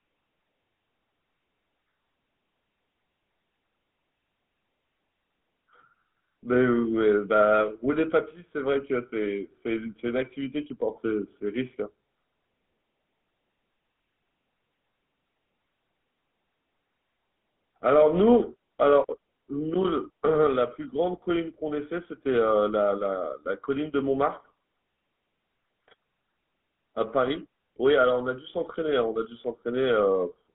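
The whole clip carries GSM full-rate codec damage, plainly audible. A pulse-driven vocal-tract model leaves the speech buzzy and gravelly. Nothing passes above 3.8 kHz, within a 150 Hz to 3.4 kHz band.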